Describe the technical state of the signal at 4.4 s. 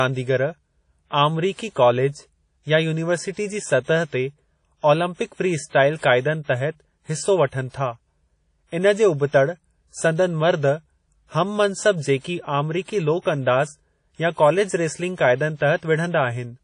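At 4.4 s the speech has been through a low-bitrate transform codec, most likely WMA compression, and this damage runs through the whole clip. The encoder's long blocks spread quantisation noise over tens of milliseconds and zero out weaker spectral lines, consistent with roughly 32 kbps. Nothing survives above 10.1 kHz, so the top end sounds dull, while a ringing, washy hiss swells and fades with the speech.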